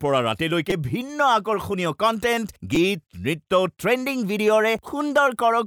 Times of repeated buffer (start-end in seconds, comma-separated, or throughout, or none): 0.70, 2.75